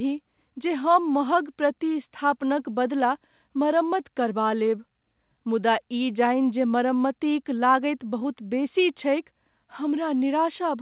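Nothing in the speech amounts to a technical fault, and the call-path band limit, with nothing above 4 kHz, is normal.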